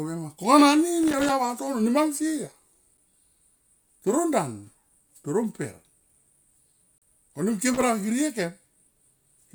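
From 1.03 to 1.29 s, loose connector crackle: a worn contact chopping the speech produces an irregular scratchy burst, unlike a clean dropout. At 2.97 s and 6.98 to 7.02 s, a gap between stream segments: timestamps about 4 s apart leave holes of roughly 7 and 37 ms filled with hard-edged silence, with nothing lost. The crackle returns from 7.74 to 7.82 s.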